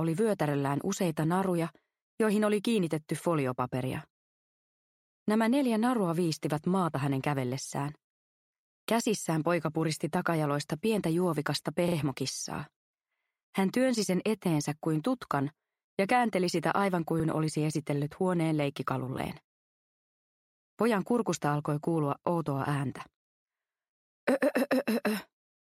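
New audio arrived late at 11.88 s and again at 17.2 s, so the device replayed its last buffer, a repeated buffer fault. A 40 ms piece plays three times, then twice, with hard joins, causing brief stutters. That length fits a 40 ms buffer.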